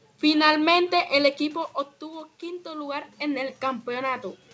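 No technical faults can be heard in this speech recording. The sound stops at 8 kHz, which fits a wideband call codec such as G.722, while the background room noise and the level shifts around 1 s and 2.5 s as the talker moves belong to the recording itself.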